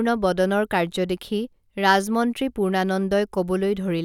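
No technical faults can be heard in the speech here. The audio stays steady throughout, with nothing that disturbs it at any point.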